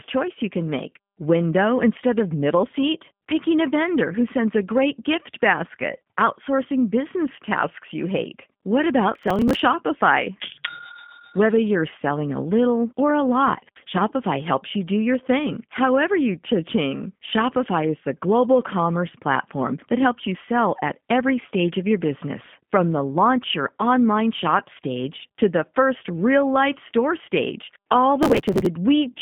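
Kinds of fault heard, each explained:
G.729 codec: The speech is rebuilt by a model-based low-rate coder, which fits G.729A at 8 kbit/s. Nothing above about 3.6 kHz survives, so the band is narrow. The damage is plainly audible, with a rough, synthetic edge on the speech.
Processor overload crackle: Many audio buffers miss their deadline in a row and are skipped, leaving hard-edged gaps. This gives gritty tearing from 9.15 to 9.59 s and from 28.23 to 28.66 s, just after "real life store stage", which fits buffers of around 5 ms.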